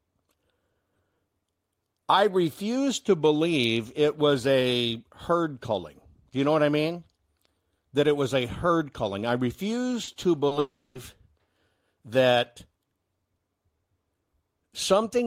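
At 10.03 s and again at 10.47 s the speech briefly smears, a wobble lasting a few hundredths of a second in which the sound seems to hang rather than move on. Both are short concealed packet loss: about 40 ms of audio arrived too late to be decoded each time, and the receiver bridged each gap by extending the preceding sound, then blended back into the real signal.

From 10.59 s to 10.98 s the sound turns into a drawn-out, fading buzz or hiss, then drops to silence for roughly 40 ms before the speech resumes further along. This is likely a long network dropout: no audio arrived for this stretch, so the receiver stretched the last sound for about 360 ms as it faded, and the speech returns without the portion that never reached it.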